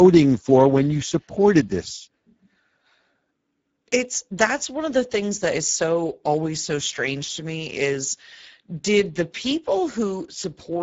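From start to finish, the speech carries Speex codec damage, and it is plainly audible. Speex is a CELP coder. It models the vocal tract and spends its scarce bits on the excitation signal. Here that budget is thin, which points to a bitrate near 10 kbps. The result is a coarse, hoarse texture on the voice. Nothing is present above 7.7 kHz, so the top of the band is simply cut off.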